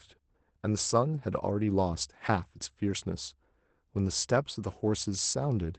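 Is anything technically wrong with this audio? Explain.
Yes. At 1.17 s and 2.01 s there is a lost packet rebuilt from error correction. Each 20 ms packet was dropped, and the decoder filled it from a low-bitrate copy carried in the next packet, so there is no gap, just a brief rougher, noisier patch. The speech passes through a call codec whose band stops at 8 kHz, which fits Opus at around 24 kbps.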